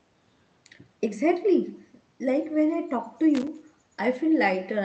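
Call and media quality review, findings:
Echo with no canceller, throughout. Faint, thin copy of the speech trails each phrase by about a fifth of a second, about 28 dB down. Far-end loudspeaker audio is picked up by its microphone and returned uncancelled after the network round trip.

Loose connector crackle, 3.35 to 3.47 s. Short irregular burst of scratchy crackle. Probable component is a worn or dirty contact making and breaking, chopping the signal. The band-limited call sound around it fits Opus near 32 kbps.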